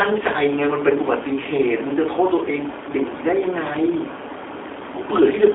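Speech passed through a G.729 codec throughout, rough and synthetic as 8 kbit/s coding implies. A spectrogram shows energy confined to roughly 300 Hz to 3.5 kHz.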